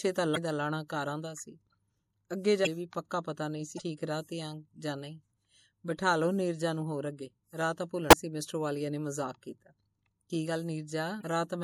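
Throughout, the speech has a watery, swirly edge with smeared consonant attacks, likely from MP3 compression at a low bitrate, fitting around 64 kbps. A spectrogram shows a hard treble ceiling and flickering high-frequency patches. Damaged data in a compressed stream then causes brief glitches at 0.33–0.37, 2.63–2.67, 3.75–3.80, 8.09–8.13 and 11.20–11.23 s. Each time the decoder loses frame sync, leaving a roughly 40 ms smeared vertical band and a waveform discontinuity.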